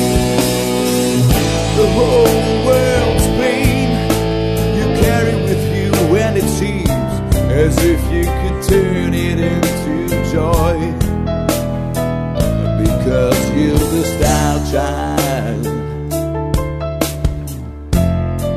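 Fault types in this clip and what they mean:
No fault can be heard anywhere in the recording; the signal holds steady in level and continuity throughout, with nothing breaking into it.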